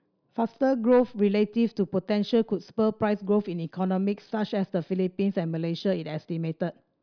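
No technical faults can be heard anywhere in this recording.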